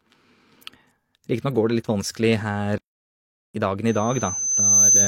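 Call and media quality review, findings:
Playback stall, 2.78–3.55 s: speech cuts to silence mid-flow for about 0.77 s, then resumes. Likely cause is a player buffer underrun or a blocked playback thread. Unlike a network dropout or packet loss, this is one long clean gap.

Loudspeaker feedback squeal, 3.87 s to end: a single 6.2 kHz tone swells over roughly a second to about 10 dB above the speech. The mic is picking up its own loudspeaker, and at that frequency the loop gain exceeds one. Unlike a steady interference whistle, it grows on its own.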